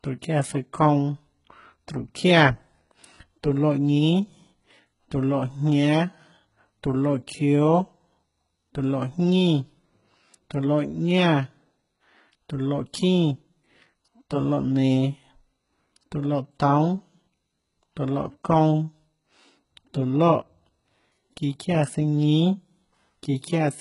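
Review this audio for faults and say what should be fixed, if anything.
HE-AAC compression, likely, throughout: the treble above a coded lower band is rebuilt by copying upward, so s sounds turn gritty and metallic, with nothing above 11.1 kHz, consistent with roughly 12 kbps. Prevent it by re-sourcing or re-encoding the speech from the original at a much higher bitrate, or with a codec that doesn't synthesise the treble.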